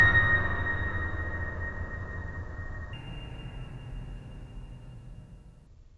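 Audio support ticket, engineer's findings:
Wrong sample rate, 2.93–5.67 s: music runs 1.5x fast, pitch up 7 semitones. This fits 16 kHz material clocked out at 24 kHz with no resampling. On a spectrogram, harmonics shift up by 1.5 and events compress in time. Waveform periods are visibly shorter.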